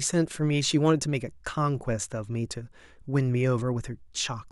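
No technical faults can be heard anywhere in this speech recording.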